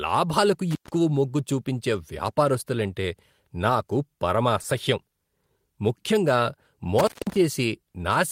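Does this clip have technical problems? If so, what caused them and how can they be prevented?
Yes, there are two kinds. Intermittent contact hits at 0.71 to 0.89 s, just before "మొగ్గు చూపించే వ్యాపారస్తులంటే నాకు", and again at 6.99 to 7.36 s. A loose plug or cable opens for about 131 ms and 194 ms, so the speech drops out with crackle at each edge. Reseat or replace the cable and connectors, and secure them so they can't wiggle.

Short concealed packet loss shows up at 4.62 to 4.65 s, right after "చూపించే వ్యాపారస్తులంటే నాకు పరమ". About 20 ms of audio never arrived, and the receiver patched the gap by extending the previous sound, which leaves a tiny smear. A steadier network, wired rather than Wi-Fi, and a bigger jitter buffer would prevent it.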